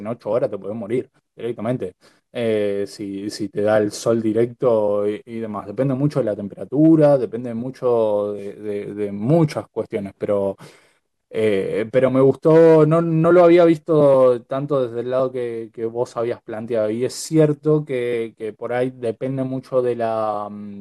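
No technical faults can be heard anywhere in the recording; the speech signal stays steady and continuous throughout, with nothing in its level, timing or tone that points to a problem in the recording or transmission chain.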